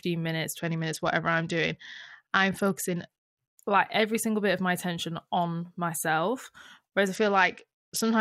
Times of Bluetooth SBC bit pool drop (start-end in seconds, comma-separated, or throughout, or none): 0.58-3.49, 7.14-8.21